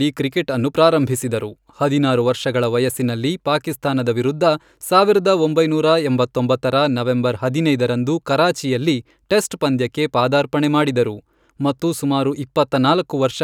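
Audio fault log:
No fault is heard in this speech clip.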